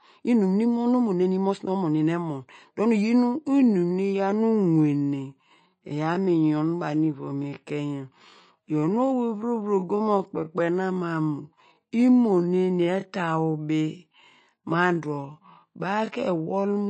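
Speech, carried throughout by what is likely MP3 compression at a starved bitrate, which fits roughly 34 kbps, leaving plainly audible watery, swirly smearing on the speech. From 3.38 s, right after "emon dor nu iyin", to the end, what is likely a time-stretched section slows the pace to 0.63 times while keeping the pitch, so the speech drags.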